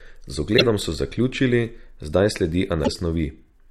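At 0.54 to 0.62 s, and again at 2.84 to 2.88 s, the speech breaks into short blips, the signature of damaged data in a compressed stream. Corrupted bytes leave the decoder misreading those frames, losing sync and hunting for the next valid frame header, so garbage briefly replaces the audio. The bursts last about 80 ms and 40 ms.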